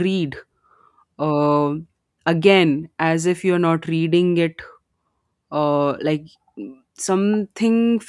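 No technical faults occur at any point in the recording, so there is nothing to describe in time order.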